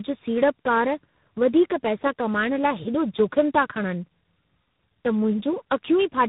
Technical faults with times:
0.00-6.28 tandem speech coding

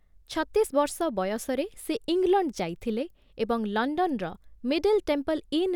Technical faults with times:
none

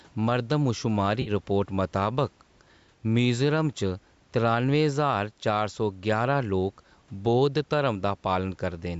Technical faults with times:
0.00-9.00 gain pumping
1.22-1.31 AAC frame loss with concealment

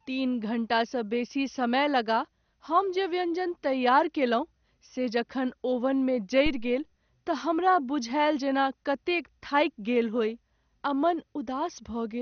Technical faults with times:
0.00-12.21 MP2 compression
6.46-6.80 phantom power thump

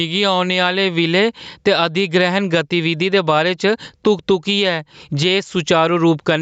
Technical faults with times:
0.00-6.41 gain pumping

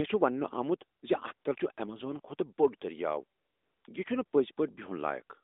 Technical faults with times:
0.98-1.02 AMR comfort noise
1.34-1.44 AMR comfort noise
3.38-3.84 AMR comfort noise
4.26-4.32 AMR comfort noise

